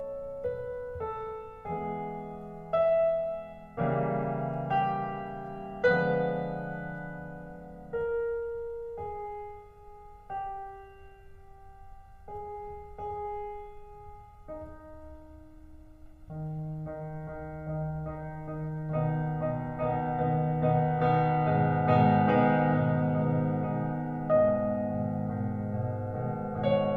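From start to finish the music has channel delay comb filtering. One side arrives roughly a millisecond and a half behind the other, and when the two are folded down to mono, whatever they share cancels at a regular series of frequencies, starting somewhere around 300 Hz and repeating evenly up the spectrum. That gives the whole mix a hollow, phasey character, with the same fixed notches sitting there the entire time.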